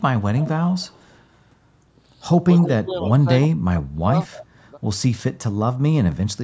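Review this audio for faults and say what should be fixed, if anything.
A faint, delayed copy of the speech trails the talker from 0.38 to 1.24 s, then returns in short scraps at 2.57 to 2.69 s, 3.02 to 3.09 s, 3.42 to 3.47 s and 4.32 to 4.46 s. Each copy lags by 308 ms and sits about 10 to 20 dB below the direct speech, loudest at 2.6 s. This is echo leak, likely from a far end on loudspeaker whose echo canceller failed to subtract all of the playback its microphone picked up. Proper echo-path modelling and residual echo suppression at that end would prevent it.

Between 2.62 and 4.29 s the talker's speech drops away in pieces, falling by as much as about 35 dB and missing for roughly a second in total. A much smaller dip of about 5 dB follows at 4.71 to 4.79 s. This is speech suppressed in double talk, likely where both sides spoke at once and the echo canceller, unable to separate the local talker from the loudspeaker echo, turned everything down. 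Better double-talk detection, so suppression stops when the near end is speaking, would prevent it.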